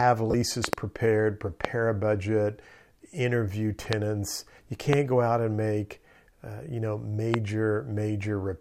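Between 0.31 and 0.34 s, lost LE Audio frames cut a 30 ms gap into the Bluetooth stream, which fits three 10 ms LC3 frames. The decoder hides the gap by replaying the last good spectrum with randomised phase signs. For that instant the speech loses its pitch and clarity and becomes a brief noisy smear. The loss is short, so the fade-toward-silence a longer dropout would bring never develops.

From 0.64 s onward, loud pops appear. Their likely cause is sudden voltage steps from a connector, switch, static discharge or driver glitch, added on top of the signal and shaped by the circuitry downstream. They come as a quick double pop from 0.64 to 0.75 s, then single pops at 1.65 s, at 3.93 s just after "a budget interview", at 4.93 s just before "go out and make", and at 7.34 s just after "make uh you know". Each peaks about 20 dB above the speech, which continues underneath.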